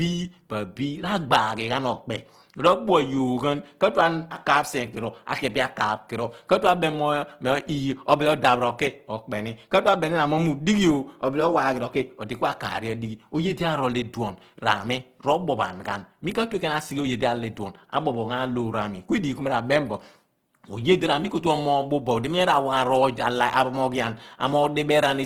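Throughout, the speech sounds grainy and rough, with noise-filled high bands reaching about 20.3 kHz, which fits likely Opus compression in CELT mode at roughly 16 kbps.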